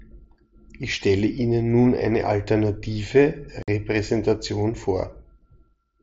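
At 3.63 s the speech drops out for about 52 ms, ending at 3.68 s. This is unconcealed Bluetooth headset packet loss over an mSBC link: a run of several consecutive voice packets went missing and nothing filled them, leaving a hard-edged hole.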